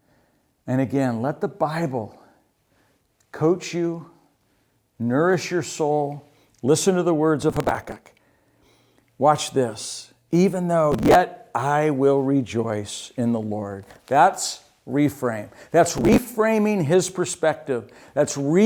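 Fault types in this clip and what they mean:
Processor overload crackle: at 7.43–8.00, 10.92–11.15 and 15.97–16.18 s, an overloaded processor skips many tiny buffers in a row, causing short gritty crackle bursts.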